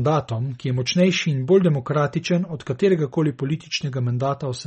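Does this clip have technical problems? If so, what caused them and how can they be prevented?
Yes. The whole clip has a watery, swirly edge and nothing above 8.4 kHz, which is likely MP3 compression at a low bitrate, something like 32 kbps. The encoder chops the treble and lets weak detail flicker frame to frame. Encode at a higher bitrate or keep a lossless copy.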